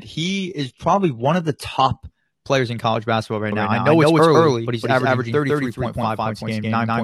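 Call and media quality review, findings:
Adaptive stream starting at a low bitrate, 0.0 to 2.0 s, ending just before "players in college basketball". Dull, synthetic-sounding treble, nothing above 11.8 kHz, stronger codec artefacts, consistent with roughly 16 kbit/s HE-AAC. Player then switches to a better rendition, about 96 kbit/s AAC-LC. Sudden step, no gap, unlike a dropout.

Doubled audio track, 3.52 s to end, starting after "in college basketball right". Full-band copy at about the same level, roughly 150 ms behind. Likely a second, slower capture path. Abrupt onset, no decay or room colour, so not echo or reverb.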